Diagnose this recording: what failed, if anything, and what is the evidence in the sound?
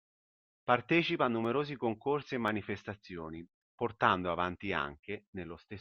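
A regular click runs through the speech from 0.42 s to 5.57 s. It repeats about every 1.03 s, roughly seven times. The stage is the driver or buffer between two devices. This is likely clock drift buffer slips. The two sides run on separate clocks that disagree by a few hundred parts per million. The buffer drifts until a small block of samples is dropped or repeated. Each slip breaks the waveform and clicks.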